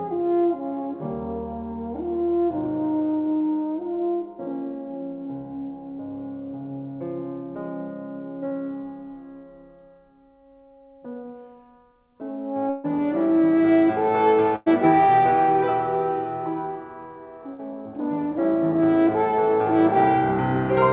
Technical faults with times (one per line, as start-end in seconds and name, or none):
8.48-8.55 short concealed packet loss
12.70-12.86 burst of packet loss
14.56-14.68 burst of packet loss
17.54-17.61 burst of packet loss